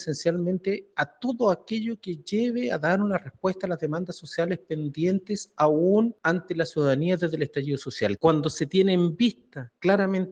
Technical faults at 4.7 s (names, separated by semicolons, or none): noise suppressor applied to music or sounds